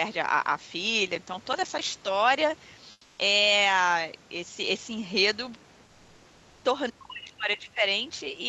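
From 1.08 to 1.87 s there is processor overload crackle: the processor repeatedly missed its deadlines, and each missed buffer became a tiny silent gap, which fits roughly 5 ms buffers, around twenty of them. The result is gritty tearing over the speech. Network packet loss would instead leave fewer, longer gaps or smeared concealment, not this dense run of hard-edged clicks.

From 2.91 to 3.17 s, about 260 ms of background is replaced by comfort noise, likely because the codec's discontinuous transmission stopped sending during the pause and the receiver generated filler. The real background gives way to a steady, featureless hiss about 3 dB quieter. A noise gate would leave true silence. Here noise remains but has lost its texture.

From 6.9 to 7.83 s there is speech suppressed in double talk, likely because the echo canceller could not separate the talker from loudspeaker echo and attenuated both. 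The voice dips in pieces by as much as about 40 dB, over roughly 0.7 s in total. Unlike the crackle's abrupt gaps, these losses are level reductions that follow the overlap.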